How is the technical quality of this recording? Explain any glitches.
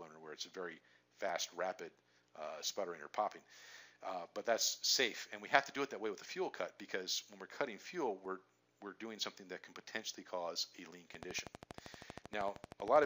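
There's one real glitch, right at the end. From 11.15 s to 13.05 s you get a train of clicks: around thirty sharp ticks, evenly spaced at 12.7 per second, and they stand out well above the sound, peaking at about 10 dB over it. They sound alike and keep their steady rhythm through quieter moments too. That kind of regular, repeating pulse is likely interference from nearby equipment, or a dodgy connection or power supply, injecting the same spike over and over.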